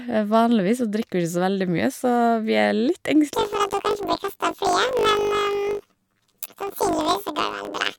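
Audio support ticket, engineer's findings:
Planar audio read as interleaved, 3.34 s to end of clip. Speech becomes a robotic buzz at 50 Hz. Probable deinterleave stage taking 20 ms planar blocks as L/R pairs. Each block plays twice at double speed, an octave up, left then right.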